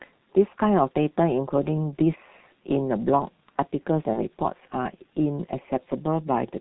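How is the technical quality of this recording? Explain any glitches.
The technical quality is poor, with heavy low-bitrate codec damage throughout and one brief dropout.

The whole clip passes through the G.723.1 codec, squeezed into about 6 kbit/s (consistent with its 6.3 kbit/s mode). Everything above 4 kHz is removed and the coarse, slowly updated voice model smears detail, so the speech sounds muffled and hoarse, with blurred consonants.

From 4.14 to 4.22 s, VoIP packet loss concealed by the speech codec produces a glitch. A packet went missing, consistent with one lost 30 ms frame, and the decoder extended its last pitch and filter at falling gain. The result is a short, fading smear, with the voice staying weak until the decoder recovers.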